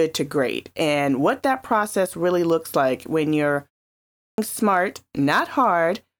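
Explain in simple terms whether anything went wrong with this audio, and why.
After "looks like when you're" there is a brief pause, and at 4.03 s the speech resumes abruptly with its opening missing until about 4.38 s. That is a clipped start after a pause: the playback device dozed off during the short silence and needed about 0.35 s to wake, swallowing real speech. Muted pauses only quiet the gaps and lose nothing.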